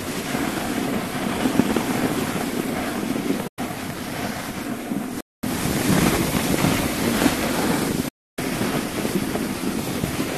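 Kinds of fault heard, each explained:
Digital broadcast dropout: the receiver lost valid frames and muted until clean ones returned, so the sound fades out over about 8 ms and goes silent for roughly 96 ms at 3.47 s, then 288 ms at 8.08 s. The audio sent during each gap never comes back.
Playback stall: the output halts in mid-flow at 5.21 s and stays silent for about 226 ms before resuming. This is likely the player running short of data or its audio thread being briefly blocked, with output continuing once it caught up.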